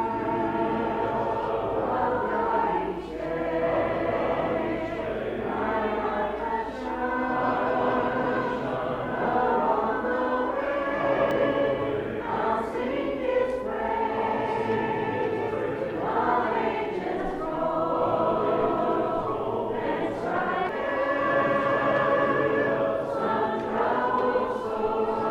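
The audio has damaged data in its compressed stream at 11.31 s and 20.69 s. Each time the decoder hits corrupt frames and loses sync until the next frame header, leaving a brief glitch heard as a chirp, squawk, click or short hole.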